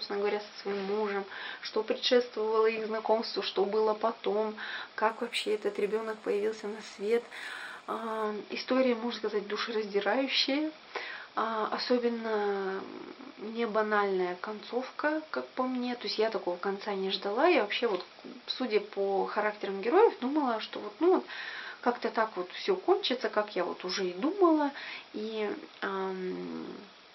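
From 5.09 to 8.25 s the audio shows imaging from linear upsampling, consistent with a 12 kHz source raised to 48 kHz by straight-line interpolation. The top is dulled, and a faint mirrored copy roughly 25 dB down fills 6–12 kHz as metallic shimmer. Unlike aliasing, the images mirror upward rather than folding downward.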